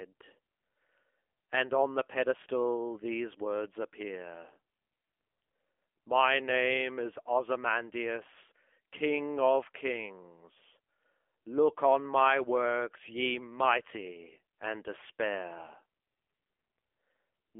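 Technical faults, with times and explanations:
Throughout: AMR narrowband mobile codec. The speech sounds squeezed into a phone line, about 300 Hz to 3.4 kHz, with nothing on top. The voice has a clear buzzy, synthetic edge from the vocal-tract model, which points to a low AMR-NB mode around 7.4 kbps.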